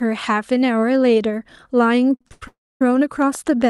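From 2.15 to 2.43 s the speech drags through repeated stalls (stutter). Packets kept arriving too slowly, so the jitter buffer emptied four times in quick succession, and each time the receiver stretched the last sound until data came back. About 0.2 s of filler takes up roughly three quarters of that stretch, the longest single hold lasting 88 ms. Nothing is lost. What separates this from a freeze is the choppy, start-stop rhythm of several short holds rather than one long one.

Just after, from 2.48 to 2.82 s, comes a call audio freeze. The speech halts once, and the held sound decays quickly, leaving about 0.27 s of silence within a 0.33 s pause before the audio resumes exactly where it stopped. Nothing is skipped, so the rest of the speech arrives that much later. The likely cause is packets held up in transit long enough to drain the buffer completely. Unlike the stutter, this is a single break that fades to silence.

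From 3.22 s to the end of the clip a train of clicks sits over the sound: sharp, near-identical ticks at a steady 7.6 per second, about as loud as the speech itself. They keep the same shape and pace whatever the speech is doing, which marks them as something added on top rather than damage to the signal, and distinguishes them from random crackle. The likely source is electrical interference or a faulty connection or power supply injecting pulses.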